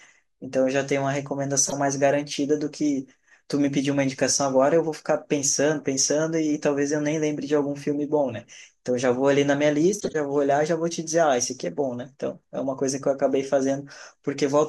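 At 1.65 to 1.73 s and 9.99 to 10.16 s, a corrupt frame was decoded. Damaged compressed data misplaced energy, causing brief squeaky noise bursts.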